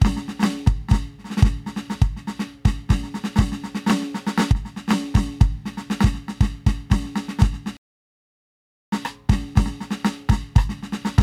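A playback stall interrupts the music from 7.77 s to 8.92 s, cutting it off mid-flow into about 1.15 s of silence before it carries on again. The output simply goes dead for that stretch rather than fading or glitching. The likely cause is the player running short of data, or its audio thread being held up, so nothing reached the output until it recovered and picked the music back up.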